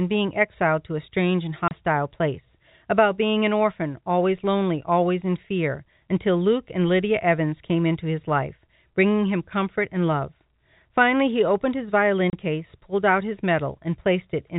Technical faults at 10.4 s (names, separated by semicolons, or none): none